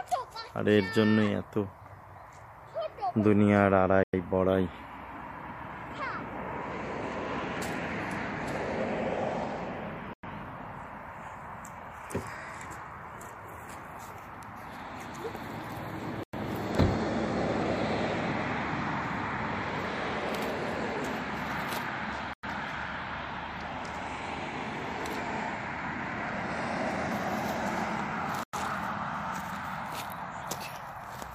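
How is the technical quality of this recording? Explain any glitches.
The recording is marred by one recurring glitch, heard five times. A gap between chunks opens at 4.03, 10.13, 16.23, 22.33 and 28.43 s, each a 100 ms silence. The audio appears to have been delivered in 6-second chunks with dead air inserted at every join, so nothing is lost, but the sound is interrupted. Each gap is a short hole, and because the breaks recur about every 6.1 s they form a steady, predictable stutter.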